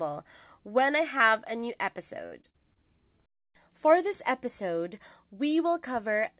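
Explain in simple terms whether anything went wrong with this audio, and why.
Between 2.26 and 2.78 seconds the speech turns choppy and robotic. This is repeated packet loss. Over that half-second, chunks of audio failed to arrive in time four times, the longest gap about 55 ms. Each time, the receiver filled the hole by stretching out the last bit of sound it had, so about a quarter of that stretch is patched-in guesswork. That repeated patching gives the choppy, broken texture. The audio also went through a phone-style call path, which is why there is nothing above 4 kHz.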